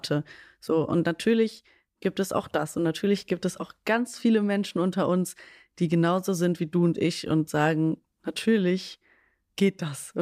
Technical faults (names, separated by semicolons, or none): none